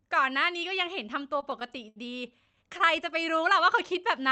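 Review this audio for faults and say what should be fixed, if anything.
Repeated stalls (stutter) at 1.23–1.98 s and 2.46–2.82 s: the jitter buffer kept running dry, so the last sound was stretched to cover gaps, the longest about 74 ms, leaving the speech dragging without losing content. To prevent it, steady the network delivery or give the jitter buffer more headroom so late packets arrive before playback needs them.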